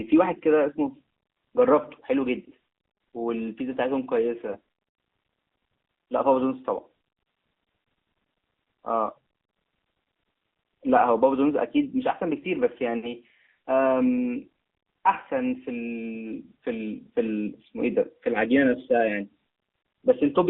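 The clip is speech carried through the AMR narrowband mobile codec for its whole length. The band is squeezed to roughly 200 Hz to 3.6 kHz, so there are no highs and little low body. The codec damage is plainly audible. The voice sounds buzzy and synthetic, as the vocal-tract model and its sparse pulses rebuild it. That degree of coarseness points to a mid-rate AMR-NB mode of around 10 kbps. There are lost AMR speech frames between 4.52 and 4.58 s. About 20 ms of audio is missing, which fits a single failed frame. The decoder filled the gap by repeating its last good pitch and tract settings at lower gain. This is heard as a brief dip or warble before the voice recovers.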